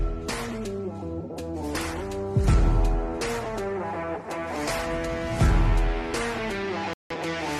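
The audio has a digital broadcast dropout near the end. At 6.93 s the sound cuts out and stays silent until 7.16 s. The hole lasts about 0.22 s. The receiver lost good data and muted its output until valid frames arrived again. The missing stretch, about 171 ms of programme, fits roughly four lost frames. That material is gone for good. The audio resumes where the broadcast had moved on, not where it stopped.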